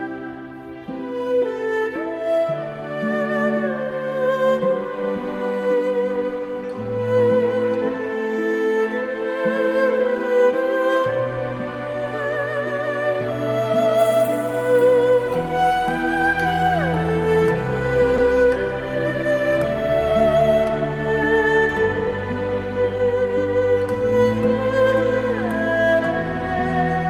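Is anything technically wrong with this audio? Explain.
Yes. There is short concealed packet loss at 18.16 to 18.20 s. About 20 ms of audio arrived too late to decode, and the receiver filled the gap by extending the preceding sound before blending back into the real stream. It comes through as a brief smear or wobble.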